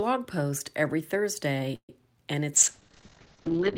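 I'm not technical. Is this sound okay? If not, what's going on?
No. There are two problems.

From 1.75 to 1.90 seconds there is a call audio freeze. The last bit of sound stretches into a fading buzz, then goes silent. The speech then carries on. Nothing is lost, but it now runs about 0.13 seconds late. Delayed network packets are the likely cause.

From 2.54 seconds to the end there is a call bitrate drop. The connection suddenly sent far less data. The voice turns rough and muffled. Everything above about 8 kHz is cut off, so the crisp top end is gone.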